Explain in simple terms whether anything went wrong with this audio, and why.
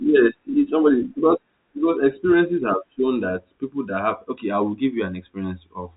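Nothing went wrong here: the speech just has the narrow phone-line sound of G.711 telephone coding, which lets nothing through above about 3.8 kHz, and that's simply how an ordinary landline call comes across.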